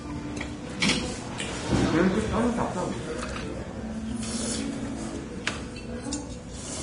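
Everyday sounds here, with a hissy, grainy top end all the way through and nothing above 10.6 kHz, which fits heavy, likely Vorbis compression at around 32 kbps.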